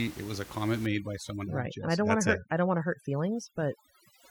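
From 0.86 s, just after "was a comment", to the end, overdone noise removal takes hold. Bands it judges to be noise get switched down one by one, so the room noise, about 18 dB below the speech, breaks into twinkling, warbling specks instead of dropping evenly as under a gate.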